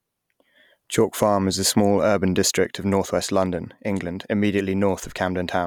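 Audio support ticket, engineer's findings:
No faults found in this speech clip; nothing to report for the ticket.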